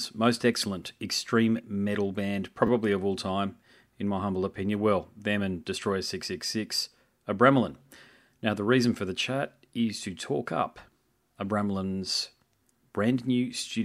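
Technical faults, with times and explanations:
0.42 s, repeated buffer: fresh audio arrived late, so a short chunk played once more just before "excellent extreme metal band", leaving a brief click at the hard join.
2.67–2.69 s, repeated buffer: after "excellent extreme metal band", the device replayed the last chunk twice, fitting a 10 ms buffer, giving a tiny buzz before "of all time in".
6.47–6.49 s, repeated buffer: audio again came late and the same chunk, roughly 10 ms long, sounded two extra times, heard as a quick buzzy stutter.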